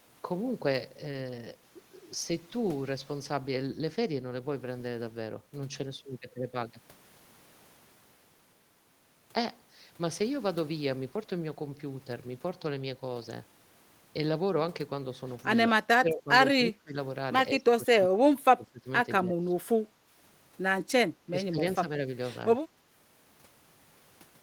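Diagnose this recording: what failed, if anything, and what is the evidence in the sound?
Call processing: the speech dips by about 10 to 25 dB at 15.68, 16.0, 16.54, 17.58 to 18.87, 19.17, 20.88, 21.26 and 22.76 s. This is likely speech suppressed in double talk, where the echo canceller mistook the talker for loudspeaker echo.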